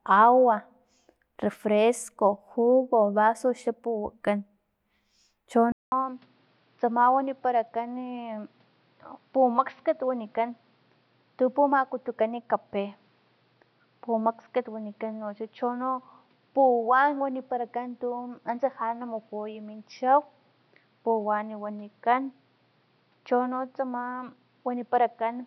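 At 5.72 s the speech drops out for about 200 ms, then returns duller and a bit quieter, with nothing above 5.8 kHz and faint new background noise underneath. That's most likely the input switched to a poorer device, and it stays that way to the end.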